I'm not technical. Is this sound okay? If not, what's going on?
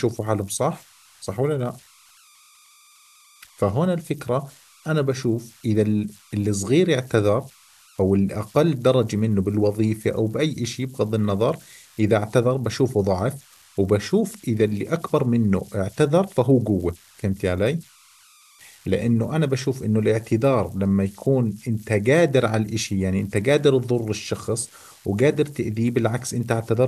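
No. Converter idle tones run through the whole recording: a whistle at roughly 1 kHz shows up in the pauses, with a grainy hiss under the quiet parts of the speech. The converter that digitised it lacked added noise, so quiet signals trapped it in repeating patterns.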